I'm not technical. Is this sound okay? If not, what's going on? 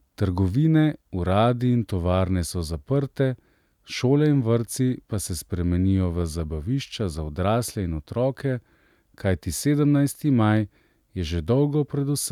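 Yes, nothing stood out as a problem when listening to this recording.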